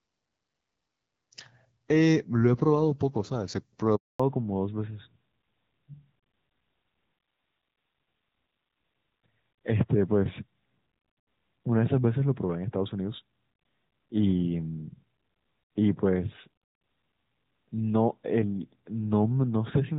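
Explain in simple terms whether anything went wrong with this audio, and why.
Yes, two things go wrong, one right after the other. At about 3.96 seconds there is a handover gap. The call was being passed from one network to another, and for about a quarter of a second, until 4.2 seconds, no sound arrived at all. The speech fades out within a few hundredths of a second and falls silent. Whatever was said in that moment is simply gone. A dropout from a weak signal tends to stutter or break up in bits, but this is one clean hole that ends with a change of link.

From 4.2 seconds to the end there is a fallback to narrowband. Before the gap the call was running in HD Voice, which sounds fairly clear, with only light coding roughness. After the switch the call drops to an older, lower-quality codec, and everything above 4 kHz disappears. The speech becomes duller and more muffled, like an old landline. 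A muffled microphone or a cloth over the phone would soften the sound gradually, but here the crisp top end is cut away all at once, right at the moment the network changed, and it never comes back.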